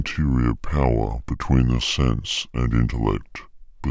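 From start to finish the speech sounds low, heavy and dragging. It runs at 0.726 times normal speed, with every pitch dropped by 5.55 semitones. This is a wrong sample rate fault: the samples were replayed slower than recorded, with no conversion, which fits 22 kHz audio played at 16 kHz.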